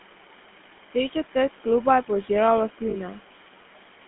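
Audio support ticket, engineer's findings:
Noise suppressor artifacts throughout: suppressor cutting steady-noise bands by about 12 dB frame by frame, so room noise sinks between phrases and swells under speech.

GSM full-rate codec throughout: pulse-excited vocal-tract coding, consistent with 13 kbps, line band 200 Hz to 3.4 kHz. Speech buzzy and gravelly, highs gone, damage plainly audible.

Lost GSM frames at 2.90 to 2.97 s: 40 ms of bad frames replaced by repeats of the last good frame, heard as a brief rough metallic ring.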